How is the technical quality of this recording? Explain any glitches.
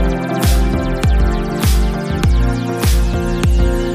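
No audible glitches or faults.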